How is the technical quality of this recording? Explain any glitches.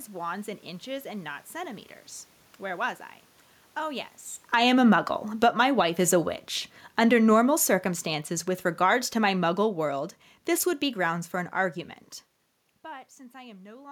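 The level sags twice in this speech recording, an automatic gain falling fault. Between 4.38 and 4.76 s the sound drops by about 7 dB, and from 5.28 to 11.88 s it sinks again, more slowly, by about 11 dB. The room noise falls along with the voice, which shows the gain itself is being turned down rather than the talker moving. The automatic gain control judged the input too loud, or its background noise too strong, and wound its gain back over these stretches.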